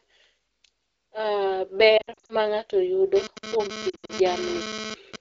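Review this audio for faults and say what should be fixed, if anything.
Lost AMR speech frames: radio errors caused speech frames to fail their checksum, and the AMR-WB decoder filled the gaps by reusing the last good pitch and vocal tract settings at falling gain. From 1.97 to 2.33 s, just before "ma ng'ato", about 200 ms of audio is lost across 320 ms, with runs up to 60 ms. From 3.89 to 4.14 s, 160 ms is lost across 200 ms, with runs up to 80 ms. The sound dips, warbles and smears, thins out quickly in the longer runs, and comes back rough for a moment. Stronger channel coding or a better radio link would reduce the frame errors.

GSM phone buzz: from 3.16 to 5.16 s, starting right after "ma ng'ato", a nearby 2G phone transmitting in bursts about 217 times a second had its radio pulses rectified by the audio circuitry. The result is a hard, raspy 217 Hz buzz rich in harmonics, about 10 dB below the signal and unrelated to it. 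It switches on and off, which fits a phone moving data rather than holding a call. It lies on top of the light coding texture of the 12.65 kbit/s wideband codec. Keeping 2G handsets away from the equipment, or adding RF filtering and shielding on its audio inputs, would prevent it.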